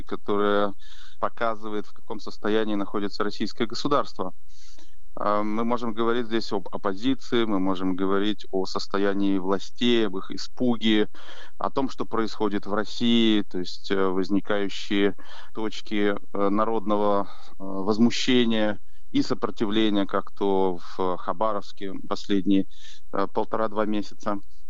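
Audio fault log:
throughout, DC offset: nothing audible marks it, yet the sound sits on a constant shift of about -24 dBFS away from zero. That fixed bias eats headroom, so clipping comes sooner, and it appears as steady energy at the very bottom of the spectrum.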